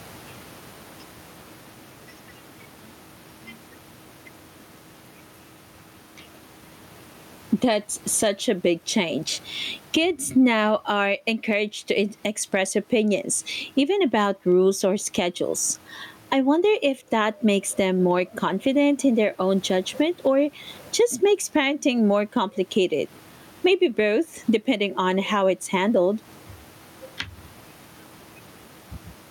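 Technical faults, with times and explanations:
Throughout, gain pumping: background swells about 15 dB in pauses and ducks under loud speech instead of gating off, likely a fast limiter fighting excessive gain.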